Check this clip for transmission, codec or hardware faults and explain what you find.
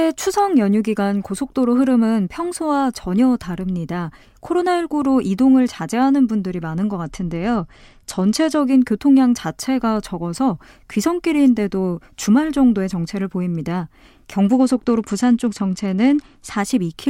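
Two Bluetooth SBC bit pool drops degrade this speech clip, from 7.04 to 8.60 s and again from 14.53 to 16.58 s. Under link congestion the encoder spent far fewer bits per frame, consistent with a fall from bit pool 28 to 12, near 96 kbps. The highest sub-bands lost their allocation and the rest were coarsely quantised, so the treble goes dull and grainy noise rides under the speech. A spectrogram shows the upper band abruptly emptied with speckled noise below it. The waveform envelope barely changes.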